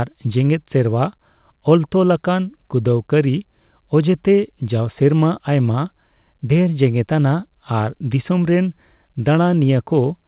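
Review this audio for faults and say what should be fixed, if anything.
Nothing stood out on listening that needs fixing; the speech carries the narrow, telephone-like sound of a call path with nothing above 4 kHz, as expected for G.711 A-law.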